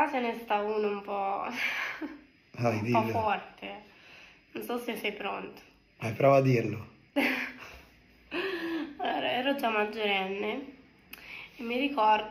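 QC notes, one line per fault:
Nothing stood out on listening to the audio.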